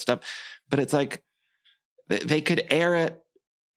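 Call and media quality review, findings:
No technical faults found in the speech signal; levels, continuity and timing hold steady throughout, and no component issue is indicated.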